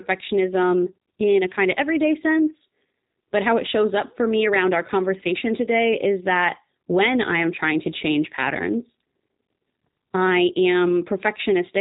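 From start to finish the speech carries plainly audible G.729 codec damage: nothing above 4 kHz, a rough, slightly synthetic texture that fits an 8 kbit/s rebuild.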